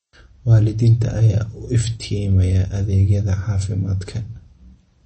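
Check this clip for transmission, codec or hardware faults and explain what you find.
The speech carries audible lossy coding damage throughout. MP3 compression, whole clip: nothing above 8.3 kHz, with watery, swirling sibilants, likely from a starved low bitrate consistent with 32 kbps, forcing treble cutoff and flickering zeroed frequency lines.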